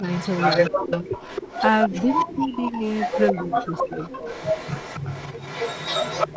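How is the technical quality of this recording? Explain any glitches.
The recording is compromised by two call-processing faults, one of which runs through nearly its whole length, on top of the band limit of the call's microphone path, which leaves nothing above 8 kHz.

Speech suppressed in double talk appears at 0.00 to 0.06 s, 0.71 to 1.48 s, 1.88 to 2.81 s and 3.33 to 4.11 s. The likely cause is an echo canceller that could not tell the talker apart from the far side playing at the same moment, so it turned everything down together. The voice dips by about 5 dB at the start and by about 15 to 20 dB in the later stretches.

Echo leak runs from 0.07 s to the end. It likely comes from a loudspeaker on the far end whose canceller failed to remove what its microphone captured, sending it back. The result is a second copy of the speech trailing about 270 ms behind, only about 5 dB quieter than the direct sound.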